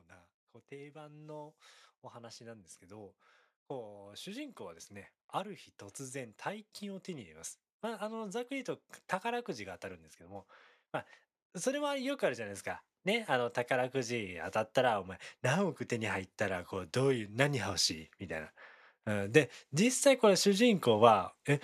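The automatic gain rises four times: from 0.68 to 5.21 s by about 6 dB, 6.11 to 9.54 s by about 5 dB, 11.53 to 17.71 s by about 9 dB, and 18.26 to 20.89 s by about 4 dB. Each time the speech seemed too quiet, so gain crept up. Speech and background swell together.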